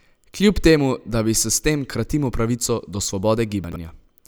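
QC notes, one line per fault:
3.64–3.76 s, chunks out of order: a brief jumbled stutter. A 40 ms chunk plays two chunks late, after the two that should follow it. Nothing is lost, but the shuffled order leaves three hard joins.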